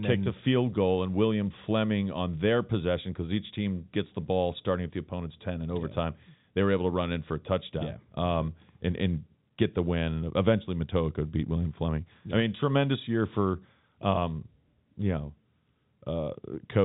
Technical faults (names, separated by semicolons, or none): none